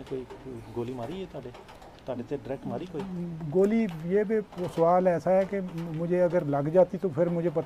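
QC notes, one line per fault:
No faults are heard anywhere in this clip. Nothing in the audio calls for a note.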